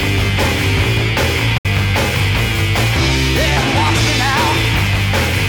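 At 1.58 s a digital broadcast dropout occurs: the receiver stopped getting usable frames and muted until valid ones returned at 1.66 s. The sound fades out over 8 ms, leaving a 64 ms hole, which points to two lost frames.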